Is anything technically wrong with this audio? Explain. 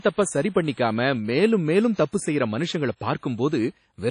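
Yes, there are two faults: one across the whole clip and one brief event.

Throughout the speech, the sound is ringing and washy, with a hiss that swells and fades with the signal. The likely cause is WMA compression at a low rate, which fits about 32 kbps. A transform coder that spreads its quantisation error over long blocks and zeroes weak spectral lines produces this kind of damage. On a spectrogram, everything stops at a hard ceiling near 10.1 kHz, and the detail below it looks patchy.

At 1.95 to 1.98 s, just before "தப்பு செய்யற மனுஷங்களை", there is pre-echo. A short hiss of about 37 ms comes ahead of the onset, which then sounds softened. The coder spreads noise sized for the loud attack across the whole block, so it also fills the quiet gap before the attack. A waveform shows low-level fuzz rising ahead of the transient, and a spectrogram shows a faint broadband smear leading into it.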